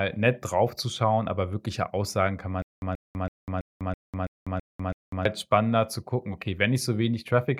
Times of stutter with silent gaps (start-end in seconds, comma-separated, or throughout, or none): 2.62-5.25